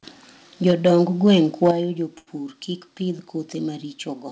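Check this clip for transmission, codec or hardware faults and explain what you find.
Three kinds of fault here: two stretches of clipped peaks, two sudden level drops during or right after them, and one brief hold from a late packet. The audio comes through a G.722 call path at 64 kbps, so there's nothing above 8 kHz.

Microphone overload, 0.66 to 1.01 s and 1.27 to 1.71 s: the loudest parts of the speech get a harsh, crackly edge, with peaks running about 3 dB past the converter's limit. The likely cause is the mic input set too hot, so the converter runs out of headroom and flattens the tops of the waveform. That hits a couple of percent of samples in the first stretch and a bit less in the second, which is enough to hear as grit on the peaks.

Microphone volume stepped down, at 0.71 s and 1.71 s: both voice and background suddenly get quieter in one step, by about 3 dB the first time and about 7 dB the second. 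They land right on the distorted peaks, which fits the call software likely spotting the overload and pulling the device's input gain down to stop it. You hear it as an abrupt dip in level, not a gradual fade.

Short stall from a late packet, 2.18 to 2.29 s: for 87 ms the sound hangs on itself, a slightly buzzy or dipped hold before things carry on. A packet missed its slot, the jitter buffer ran dry, and the receiver stretched the last bit of audio until the packet turned up. Playback then resumed exactly where it left off, so no speech is missing. It's just held too long, which pushes everything after it about 87 ms later.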